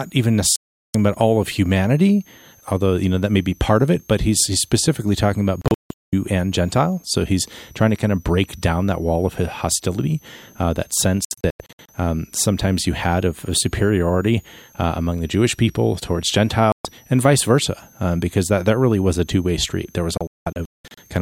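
A speech recording with a switching supply whistle running throughout. A thin tone sits high above the voice, wandering between about 5.7 and 7.0 kHz and mostly near 7 kHz, roughly 30 dB below the programme level. The drifting pitch fits a switching power supply dropping into an audible burst mode or beating against another supply, its frequency shifting as the load changes. There are also five digital broadcast dropouts, where the receiver lost good frames and muted until valid data returned. The first, from 0.56 to 0.95 s, removes about 384 ms in one hole. The second, from 5.62 to 6.13 s, falls after "he's specifically talking about" and before "and gentile so he's", with 416 ms of gaps scattered over 512 ms and the longest lasting 192 ms. The third, from 11.25 to 11.90 s, spreads 352 ms of silence over 640 ms in runs of up to 96 ms. The fourth is a single 128 ms cut from 16.72 to 16.85 s, between "the jewish people towards" and "and vice versa um". 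The fifth starts after "street there was" and runs from 20.18 to 21.02 s, losing 512 ms across 832 ms with runs of up to 192 ms. The lost lengths are multiples of 32 ms, which fits a frame size of about that length. Whatever was transmitted during the gaps is gone.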